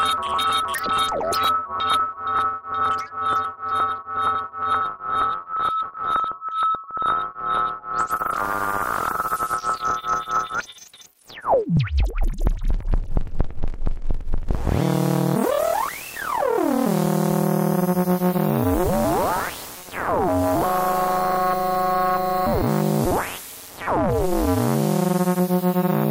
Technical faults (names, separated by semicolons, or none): Bluetooth SBC bit pool drop